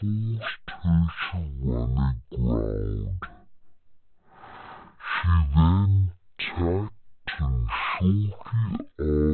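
From start to finish, the speech plays at the wrong sample rate. It runs at about 0.36 times normal speed, and pitch drops by about 17.6 semitones. That fits 44.1 kHz audio replayed at 16 kHz without conversion. Voices sound deep, slow and dragged.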